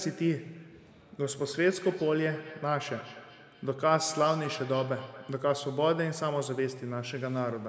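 From 1.22 s to 5.5 s there's feedback echo between two devices: a second device in the same room is playing this call back, and this microphone picks it up again. The echo canceller here only removes its own device's playback, so that copy goes straight through. You hear each bit of speech come back roughly a fifth of a second later, thinner and a bit ringy, peaking at about 16 dB below the speech. The call's microphone processing trims the lowest bass and nothing comes through above 8 kHz, which is normal for a call path.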